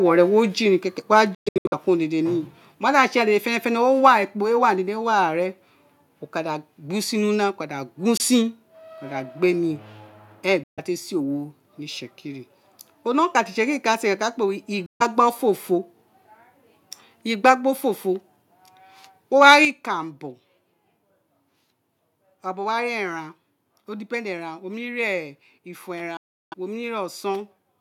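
Just after "jiria kekere", a microphone volume step down of about 2 dB at 1.02 s drops everything at once, likely from call software reacting to a hot input. Microphone overload follows at 1.13–1.2 s: flattened peaks about 1 dB over, with a harsh crackle that a clean level change lacks, likely from input volume set too high. A Bluetooth dropout at 1.35–1.74 s scatters silent holes, the longest about 0.12 s, with sound resuming as if it had played on, likely from late packets to the headphones. Further overload at 4.05–4.07 s is followed by a step down of about 2 dB at 4.08 s. Dropouts at 8.17 s (about 23 ms), 10.64–10.79 s and 14.86–15.02 s leave gaps rather than distortion. Overload at 17.45–17.5 s and 19.41–19.56 s, up to about 4 dB over, precedes a larger step down of about 7 dB at 19.65 s. A final dropout at 26.17–26.54 s loses about 0.35 s.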